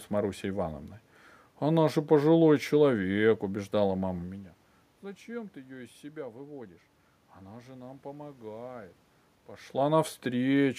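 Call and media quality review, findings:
No system faults found in the speech path; the level shifts around 4 s and 9.5 s come from the talker moving relative to the microphone, and the background is room noise picked up at the source.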